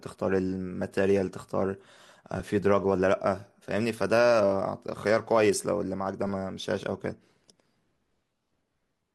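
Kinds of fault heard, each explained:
Repeated buffer: fresh audio reached the output device late, so it replayed its last 5 ms block. At 2.40 s this happens once and is heard as a single click. From 6.27 to 6.29 s it repeats four extra times and is heard as a brief buzz.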